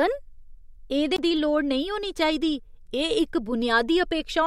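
The clip is speech with a CD skip at 1.16 s. You hear a small tick and a very short dropout, about a fiftieth of a second. Then the speech picks up from a different point, so the flow breaks suddenly. The laser has jumped to another turn of the disc's spiral, from a knock or a flaw on the surface. The player mutes briefly while it relocks, then carries on from the new place.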